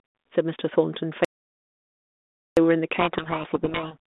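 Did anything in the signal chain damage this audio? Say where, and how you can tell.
Yes. From 1.25 s to 2.57 s the speech stops dead and the gap is silent, about 1.32 s long, with no room tone or hiss underneath. The sound resumes mid-flow rather than fading. This is an audio dropout to silence at the input or driver stage: the recorder kept writing zeros while the signal was absent, most likely because the capture device or its link briefly lost the input.

From 2.98 s to 3.96 s the speech is buried under harsh, grinding distortion, then clears abruptly. This is a codec payload misread at the codec stage. The G.726 stream itself runs at 32 kbit/s, with light coding damage and a line band of about 200 Hz to 3.6 kHz. During this stretch, though, the decoder read each code word in the wrong bit order, so every sample difference it reconstructed was wrong.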